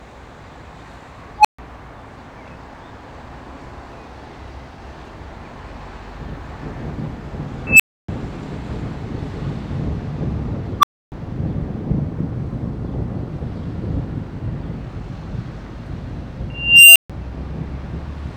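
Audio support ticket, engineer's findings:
Unstable filter at 1.38–1.59 s, 7.67–8.08 s, 10.80–11.12 s and 16.50–17.10 s. Tone near 1 kHz or 3 kHz swells over 36–456 ms to clipping, then 140–290 ms dropout as the runaway recursive section overflows and resets. The dropout separates it from plain feedback howl.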